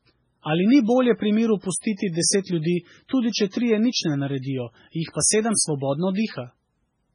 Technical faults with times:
0.00-7.15 MP3 compression

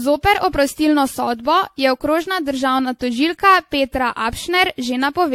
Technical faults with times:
0.00-5.34 generation loss

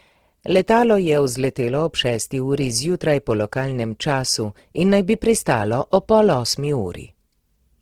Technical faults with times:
0.00-7.81 Opus compression

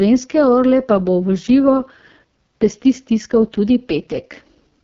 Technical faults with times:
0.00-4.83 AMR wideband (HD Voice) codec

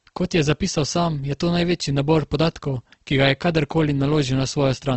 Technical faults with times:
0.00-4.97 Opus compression

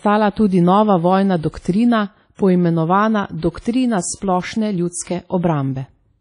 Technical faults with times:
0.00-6.21 WMA compression

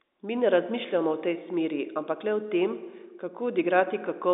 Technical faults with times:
none

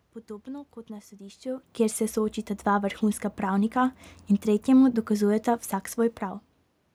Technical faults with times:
none

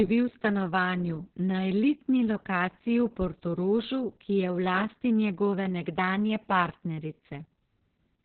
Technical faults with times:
0.00-8.25 Opus voice compression

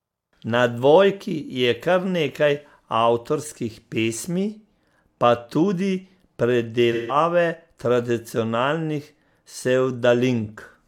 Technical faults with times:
6.92-7.16 AAC frame loss with concealment

